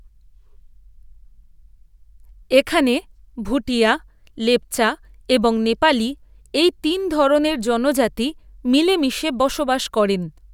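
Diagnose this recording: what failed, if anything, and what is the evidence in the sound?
Nothing failed here: listening across the whole recording, no stage in the chain gives itself away, and the speech comes through without any audible fault to diagnose.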